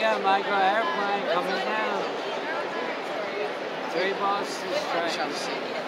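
No technical faults are audible anywhere in the audio.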